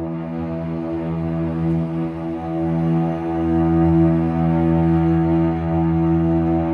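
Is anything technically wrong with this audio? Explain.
No, nothing is technically wrong with this audio.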